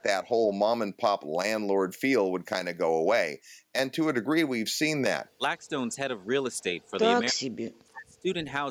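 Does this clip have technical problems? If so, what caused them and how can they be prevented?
Yes: the speech dips at 5.61–6.01 s and 6.62–7.05 s by a few decibels, then drops out heavily from 7.29 to 8.5 s. That's likely speech suppressed in double talk, the echo canceller ducking the talker along with the echo. Better double-talk detection would prevent it.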